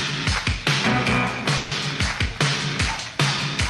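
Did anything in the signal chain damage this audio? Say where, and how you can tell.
Yes. At the network and jitter-buffer stage there is a call audio freeze from 1.57 to 1.73 s. For roughly 140 ms the last sound is stretched into a fading, buzzy continuation rather than cut to silence. When normal audio resumes, nothing has been skipped. The material simply picks up later, with about 140 ms of added delay. The likely cause is packets held up in transit, so the jitter buffer ran dry and the receiver concealed the gap.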